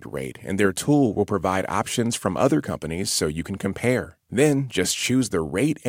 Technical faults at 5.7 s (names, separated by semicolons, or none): none